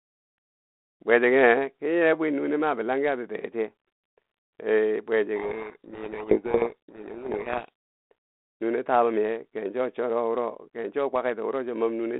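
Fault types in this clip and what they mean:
Codec payload misread: The two ends disagree on the bit order inside each G.726 code word. The decoder accepts valid-looking frames but unpacks every code word wrongly. From 5.36 to 7.69 s the speech is buried in harsh distortion, then the 32 kbit/s telephone-band sound returns.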